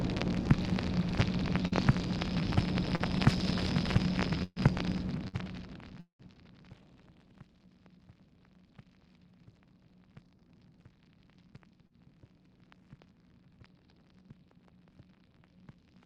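The audio has three kinds of network damage. Short concealed packet loss appears at 1.67–1.75 s, 2.96–3.02 s and 11.87–11.93 s. Each time about 40 ms never arrived, and the receiver bridged it with roughly 33 to 42 ms of extrapolated sound. This is heard as a brief smear or wobble. A burst of packet loss at 4.43–4.59 s drops about 120 ms. That gap is filled with a decaying continuation of the preceding sound, ends in about 20 ms of silence, then jumps ahead. A shorter burst at 5.28–5.38 s loses about 40 ms, with about 10 ms cut outright at the rejoin. At 6.00–6.22 s the sound continues as a fading buzz or hiss and then goes silent for about 100 ms before resuming, with about 200 ms of material missing. This is likely a long network dropout.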